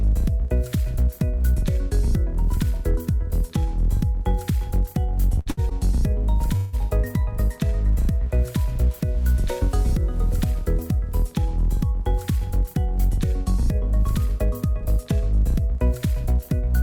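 At 5.39 and 5.50 s come two short stalls from a late packet. Each time the last sound is held, for 67 then 73 ms, with nothing lost. At 6.56 s a call audio freeze holds the sound as a fading buzz for 165 ms, likely from packets delayed in transit.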